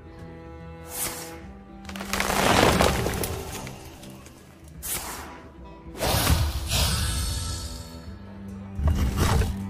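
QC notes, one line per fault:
2.03 s, corrupt frame decoded: a brief chirp-like blip lasting only a few milliseconds, consistent with a single damaged compressed frame that the decoder played instead of concealing. Flipped bits scrambled its gain and spectral codes, so energy landed at the wrong frequencies. On a spectrogram this shows as a thin vertical smear or isolated patch; the waveform shows a short foreign burst peaking around -30 dBFS.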